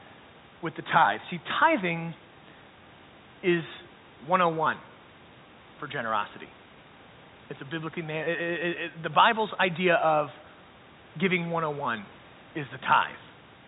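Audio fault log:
No faults detected.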